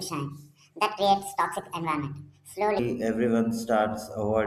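From the very start up to about 2.79 s, you've got a section at the wrong speed. That opening stretch runs at about 1.62 times normal speed, so the speech comes out rushed and chipmunky, with pitch pushed up around seven semitones alongside the tempo. Then at 2.79 s it snaps back to natural speed and pitch. The likely cause is that opening chunk being played or rendered against the wrong clock, so speed and pitch shifted together.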